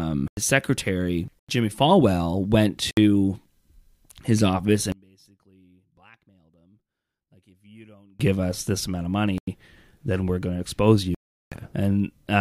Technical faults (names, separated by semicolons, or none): block of digital silence; one channel inverted